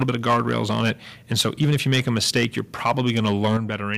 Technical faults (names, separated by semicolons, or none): microphone overload; microphone volume stepped down